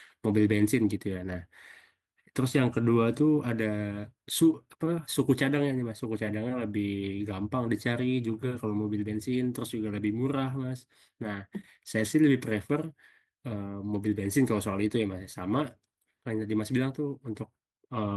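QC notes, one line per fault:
Nothing stood out on listening to this speech clip.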